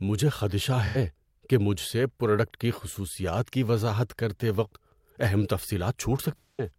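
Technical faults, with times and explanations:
0.86–0.96 s and 6.38–6.70 s, AAC frame loss with concealment: in each gap the decoder rebuilt missing frames from the last good spectrum, giving a smeared, noisy or phasey patch. On a spectrogram the harmonics blur into a flat, frozen smear. On the waveform the detailed structure turns noise-like.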